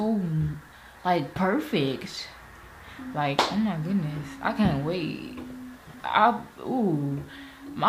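There's a short jumbled patch between 5.76 and 6.0 s that sounds like chunks out of order. A 60 ms slice of the audio turns up three chunks late, so it plays after material that should have followed it. Nothing actually goes missing, but the sound briefly stutters and scrambles, and there are three hard joins where the misplaced piece and its neighbours butt together without any smoothing.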